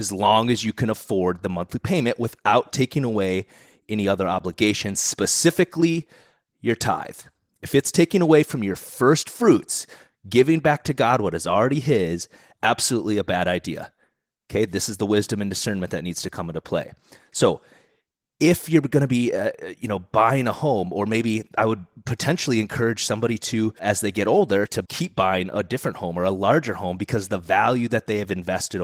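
No technical faults are audible.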